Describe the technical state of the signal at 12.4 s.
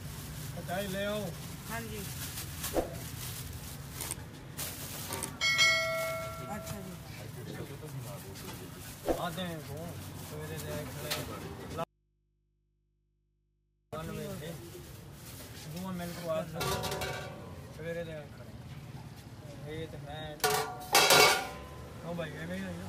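At 12.4 s the signal sits inside an audio dropout to a faint residue running from 11.84 s to 13.93 s, about 2.09 s long. The sound cuts off abruptly and what remains is mains hum roughly 40 dB below the programme level, likely from the input staying live after the source connection broke. That audible hum sets it apart from a dropout to digital silence, and the hard edges rule out a natural pause or fade.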